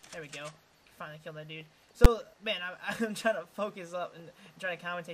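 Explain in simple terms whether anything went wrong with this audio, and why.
A calculation inside the audio processing went wrong at 2.05 s and produced invalid numbers, which the system turned into the loudest possible value. This is the fault called invalid numbers at full scale. Because it lasts only about 10 milliseconds, you hear it as a single sharp bang.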